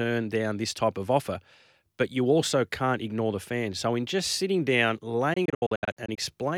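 A Bluetooth dropout runs from 5.34 to 6.18 s: within about 836 ms the speech keeps cutting to silence, losing 372 ms in total, with the longest gap 70 ms. This is likely from packets missing their delivery deadline, and the sound resumes each time as though it had played on.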